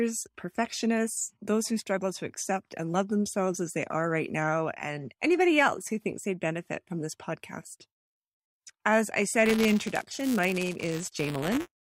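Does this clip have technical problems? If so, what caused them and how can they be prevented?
Yes. Buffer tearing from 9.46 s to 11.8 s: the writer and playback hardware cross inside each period, splicing in a sliver of audio roughly 10 ms old. This gives a 200 Hz rattle. The waveform shows hard jumps every 5 ms, and the spectrogram shows evenly spaced vertical striations. Keeping the writer safely ahead of the read position, with a larger buffer or higher thread priority, prevents it.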